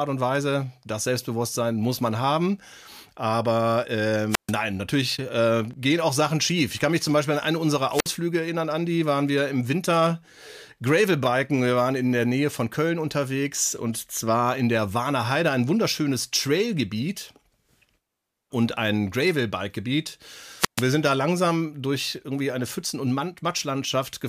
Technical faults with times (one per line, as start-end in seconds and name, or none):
4.29-4.53 wireless microphone squelch dropout
7.89-8.18 wireless microphone squelch dropout
20.56-20.86 wireless microphone squelch dropout